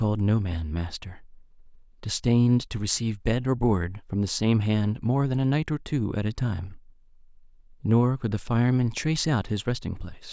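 Listening to the speech in this recording, nothing stood out as a technical fault at any point.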